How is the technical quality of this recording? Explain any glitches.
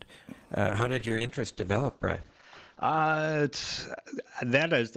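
The quality falls away after 0.69 s: from there to the end the audio turns rough and dull, with top end above about 8 kHz gone. It's a call bitrate drop, which fits a fall from 48 to 8 kbps, bottoming out for 1.66 s without recovering.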